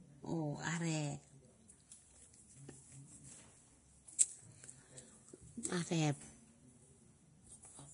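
From start to end, the speech has a grainy, hissy treble. Sibilants sound rough and smeared, and consonant attacks lose their edges. Nothing is heard above 10.6 kHz. This is likely Vorbis compression at a low setting, and the heavy damage points to a bitrate near 31 kbps. The encoder keeps a smooth spectral outline but quantises the upper band so coarsely that fine detail turns into noise-like grit.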